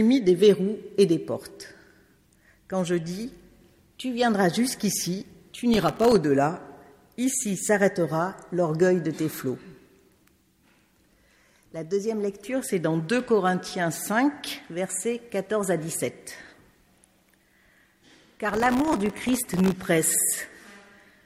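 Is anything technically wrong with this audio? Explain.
Yes. There are two bursts of processor overload crackle, from 5.74 to 6.16 s and again from 18.49 to 19.74 s, the second one about three times as long. In each stretch the processor keeps missing its deadline for very short buffers, which fits a buffer of well under a millisecond, and each miss drops out as a tiny hole of silence with hard edges. Dozens to over a hundred of those in a row come across as gritty crackle riding on the sound until the load eases.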